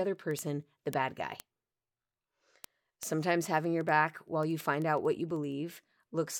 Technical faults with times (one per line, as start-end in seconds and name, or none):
0.16-6.37 word clock ticks